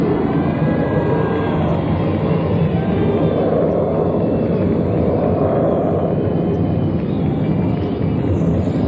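No faults are audible; the sound has passed through a call path whose codec stops everything above about 8 kHz, consistent with wideband G.722 at 64 kbps.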